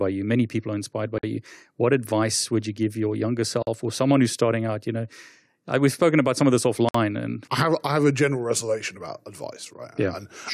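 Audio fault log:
1.18–1.23 s, 3.63–3.67 s, 6.89–6.95 s: gap at a join of encoded pieces. The speech was encoded in separate pieces and spliced without trimming each run's start-up delay and end padding, so silence sits inside continuous speech: about 52 ms after "people are inspired by", 46 ms between "you give your younger" and "or someone who's starting", and 58 ms between "about some of this" and "and I have I". Each dropout has smeared edges, then the speech resumes where it stopped.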